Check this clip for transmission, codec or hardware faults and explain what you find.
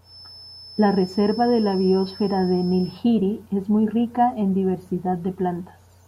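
One fault is present: a feedback whistle running from the start of the clip to 3.05 s, stopping just before "es muy rica en". A thin, steady 5.3 kHz tone sits behind the speech, roughly 20 dB below it, swelling and fading slowly in level. The likely cause is a loudspeaker-to-microphone loop held right at the edge of feedback, sustaining one high frequency without growing. Unlike mains hum, it is a single high pitch with no low harmonic series.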